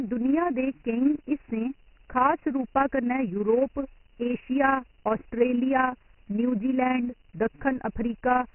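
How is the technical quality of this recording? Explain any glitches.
The quality is poor, with one fault running through the whole recording: Dialogic VOX ADPCM coding. Coarse 4-bit adaptive steps, likely at 6,000 samples a second, cut everything above 3 kHz and leave a gritty hiss trailing the speech.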